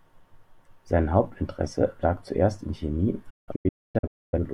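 From 3.30 s to 4.38 s a digital broadcast dropout chops the speech. The receiver lost valid frames and muted, leaving 0.81 s of silence in several holes, the longest 256 ms, each with an 8 ms fade. Spectrogram and waveform show blank vertical gaps between surviving fragments.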